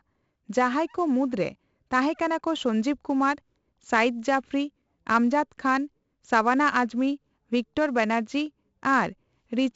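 From start to finish the speech carries 4-bit ADPCM compression, and the damage is heavy. Each sample is coded as a coarse 4-bit step from a predicted value, so the quantisation error rides on the signal as a gritty hiss that swells with every loud syllable, and sharp onsets smear where the adaptive step lags behind. Nothing reaches above about 7.7 kHz, which fits a 16 kHz rate at 64 kbps and leaves the top end dull.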